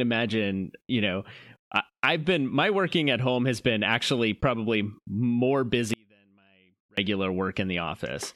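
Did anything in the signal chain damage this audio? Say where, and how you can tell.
Yes. An audio dropout to a faint residue runs from 5.94 to 6.97 s, about 1.04 s. The likely cause is an intermittent break upstream in the analogue wiring or a connector, with the path after the break still live. The speech cuts out abruptly and returns just as suddenly. During the gap only a faint sound remains, roughly 35 dB below normal, so this is not a natural pause or a fade.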